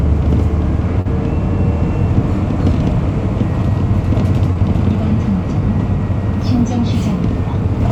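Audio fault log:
1.01–1.07 s and 4.53–4.57 s, short concealed packet loss: about 40 ms, then 20 ms, of audio arrived too late and was patched by extending the preceding sound, so each gap is a brief smear rather than the silent hole of a true dropout.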